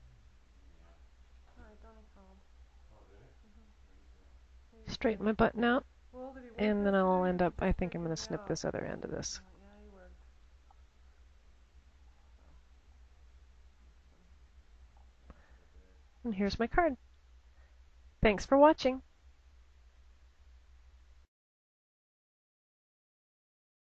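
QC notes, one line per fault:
No faults heard.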